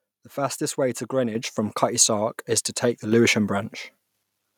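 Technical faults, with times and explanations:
1.35 s and 3.12 s, microphone volume stepped up. The sound jumps louder in one step right after "fastest way to", by about 7 dB, then after "is to take the", by about 5 dB. Software raised the input volume, so voice and background rise together.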